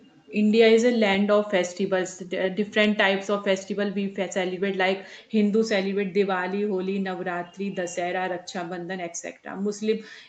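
No technical faults occur in this speech clip, which has passed through a call's microphone processing and codec path.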